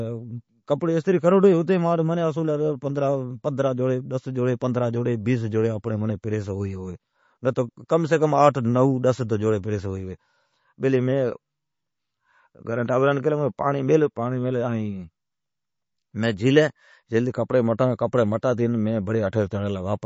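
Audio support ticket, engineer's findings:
Speech dull and watery throughout, nothing above 7.5 kHz. Likely MP3 compression, fitting a 32 kbps bitrate. Encoder cut treble and dropped weak frequency lines.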